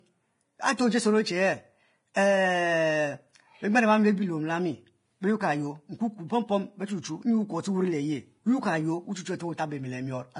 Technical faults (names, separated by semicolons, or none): Vorbis compression; pre-echo